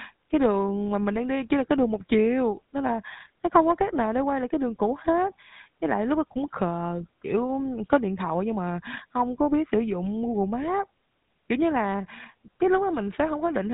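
GSM full-rate codec damage runs throughout the speech: the vocal tract is modelled and driven by sparse regular pulses, giving a buzzy, gravelly roughness and nothing above 3.9 kHz.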